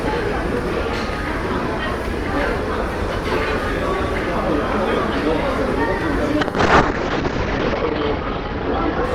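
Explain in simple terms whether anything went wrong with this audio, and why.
From about 6.41 seconds to the end, the sound turns rougher and duller, losing its crisp top end and taking on a watery, smeared texture, at its worst for roughly 1.4 seconds. This is a call bitrate drop: the call decided its connection could carry much less data, so the encoder squeezed the audio far harder, describing it more crudely and discarding everything above about 8 kHz.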